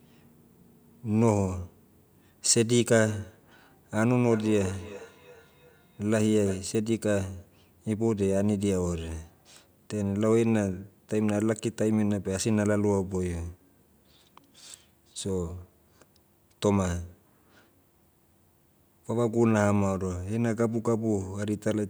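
From 4.11 to 6.72 s the speech picks up a feedback echo between two devices: a second device in the room is replaying this microphone's signal, which is captured again, and neither echo canceller removes the other's output. Each sound returns at a steady interval of around 0.3 s, thinner and ringier, peaking about 16 dB below the speech. That fixed spacing separates it from room reverberation, which smears continuously rather than repeating.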